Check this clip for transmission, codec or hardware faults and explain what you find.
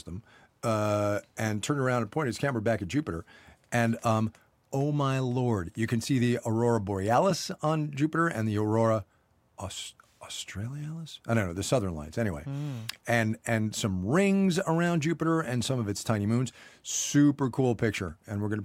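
Nothing stood out on listening to the speech recording.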